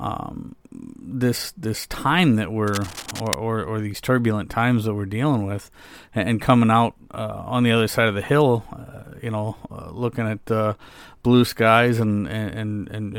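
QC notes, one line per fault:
2.68–3.34 s, cable scratch noise: after "this this time that", dense uneven crackle roughly 10 dB below the speech, likely a worn connector moving; broadband speckled bursts on the spectrogram, ragged spikes on the waveform.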